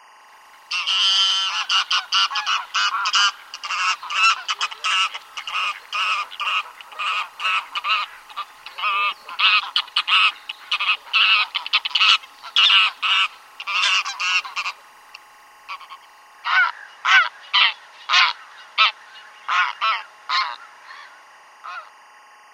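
Timecode bleed runs through the whole clip: linear timecode leaking from an adjacent line adds a steady chirping warble roughly 30 dB below the sound. Its pulse rate fits 23.976 fps code. A spectrogram shows constant bands near 1 kHz and 2 kHz, flickering with the code's bit pattern.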